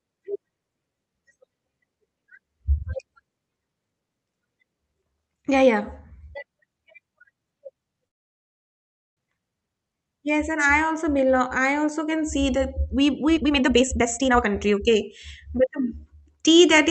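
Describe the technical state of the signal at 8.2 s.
At 8.2 s the signal sits inside a call audio freeze, 8.07 to 9.19 s. Packets likely stalled and the jitter buffer emptied. The gap is silent, and the sound then resumes with nothing lost.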